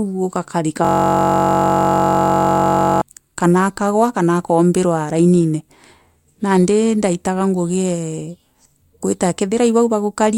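From 0.85 s to 3.01 s the speech freezes into a system hang loop. The same 21.33 ms slice, which fits a 1024-sample buffer, repeats exactly. That produces a steady 46.9 Hz buzz rather than a ragged stutter or dropout.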